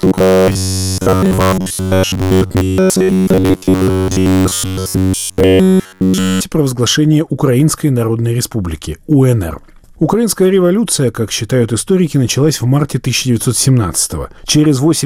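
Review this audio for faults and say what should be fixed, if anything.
Robotic sound from repeated short buffers, 0.01 to 6.41 s: the sound becomes a rigid metallic buzz at 93.8 Hz throughout, likely from one 10.7 ms buffer looping while fresh audio is skipped. To prevent it, make sure the capture or playback path delivers audio on time, with adequate buffering, so no block is ever reused.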